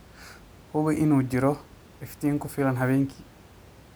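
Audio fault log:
No faults detected in this speech recording; the only background is room noise, sitting about 26 dB below the speech.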